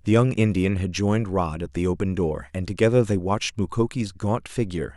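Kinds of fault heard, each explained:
No technical faults detected.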